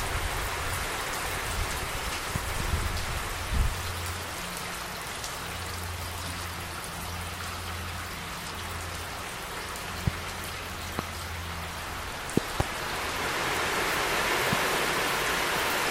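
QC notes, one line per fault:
2.36–2.63 s, loud pop: a likely voltage step from a plug, switch or static, shaped by the following circuits, gives two sharp pops, roughly 15 dB above the sound, which continues underneath.
10.07–10.10 s, loud pop: a brief electrical pulse, likely from a switch or driver glitch, gives a single hard pop, roughly 20 dB above the surrounding sound.
10.99–11.02 s, loud pop: another short pulse, likely static or a contact glitch, gives one sharp pop, roughly 20 dB above the sound, with the sound running on beneath it.
12.37–12.63 s, loud pop: a likely double electrical transient, from a plug or switch, gives two pops in quick succession, the loudest in the clip at roughly 25 dB above the sound.
14.53–14.55 s, loud pop: a short voltage pulse, likely from static or a driver glitch, gives one sharp pop, roughly 15 dB above the sound, which carries on underneath.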